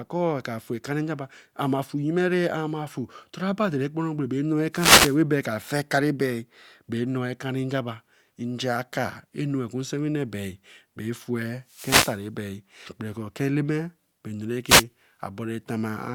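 A speech recording with three wireless microphone noise hits: 4.72–5.18 s, 11.66–12.27 s and 14.67–14.84 s. Each is a brief swish of static as the analogue FM link's radio signal fades, so receiver noise rises and partly covers the voice. On a spectrogram each hit shows as a broadband vertical smear of hiss across the full frequency range. On the waveform the noise floor visibly swells and then drops back.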